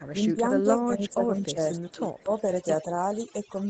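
Speech runs through the whole clip with overdone noise removal: the suppressor is cutting individual frequency bands hard wherever they sit close to its noise estimate, so the background collapses to near silence with twinkling specks, and the softer parts of the voice are dragged down too. The band-limited character, with nothing above 8 kHz, is consistent with the call microphone processing and a wideband Opus call path. Between 0.33 and 1.59 s the voice dips in pieces totalling roughly 0.7 s, with the deepest drop about 10 dB. Shorter dips follow at 1.93 to 2.03 s and 2.23 to 2.31 s, each reaching about 15 dB. This is speech suppressed in double talk, likely the echo canceller failing to separate the near talker from loudspeaker echo while both sides spoke and turning everything down. Echo leak appears at 1.09 to 1.14 s and again at 2.19 to 2.34 s as a faint copy of the voice delayed by 167 ms, about 35 dB and then about 25 dB below the direct speech. 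The likely cause is a far-end loudspeaker whose echo canceller let part of the microphone pickup through and sent it back, so the second, louder fragment lands right on top of the last suppression dip.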